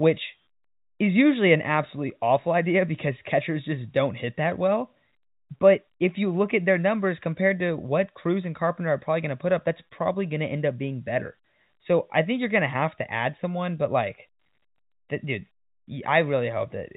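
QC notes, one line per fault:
Nothing stood out on listening to this telephone-band speech, which has the narrow G.711 sound with nothing above 4 kHz.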